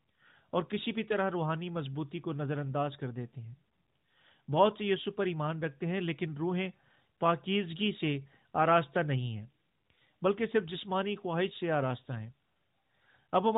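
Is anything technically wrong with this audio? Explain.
No, nothing is technically wrong with this audio.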